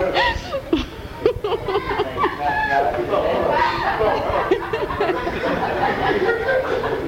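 Nothing here stands out as a fault; the audio runs along with no dropouts, clicks, glitches or other technical trouble to point to.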